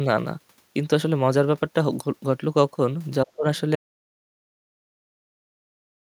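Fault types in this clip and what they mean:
Speech suppressed in double talk, 3.25 to 3.45 s: the speech dips sharply, by roughly 20 dB at its deepest, over about 150 ms within that span, and recovers. This is likely an echo canceller reacting to both ends talking at once. Unable to tell the near talker apart from the loudspeaker echo it was trying to remove, it turned everything down, so the near speech was attenuated along with the echo.
Audio dropout to silence, 3.76 s to the end: the sound stops abruptly and never returns, leaving silence with no room tone or background hiss. The likely cause is a lost input, such as a disconnected device, broken link or accidental mute, while the recorder kept writing silence. Nothing from the remaining two-plus seconds survives, and the clip simply finishes inside that empty stretch.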